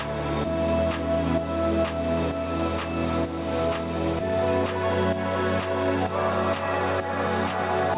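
No faults can be heard.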